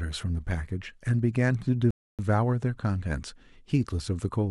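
Speech with a rebuffering stall from 1.91 to 2.19 s: playback starved, inserting 0.28 s of flat-line silence, then resuming exactly where it stopped with nothing lost, a clean blank gap on waveform and spectrogram.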